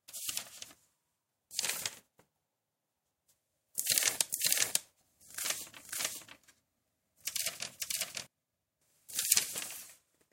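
A second copy of the same signal, likely from a slower capture path or a misaligned edit, gets mixed into this sound recording, producing a doubled audio track from 4.29 to 8.27 s. The full-band duplicate trails by about half a second at roughly the original's level, without decay or room colour, and it cuts in and out abruptly.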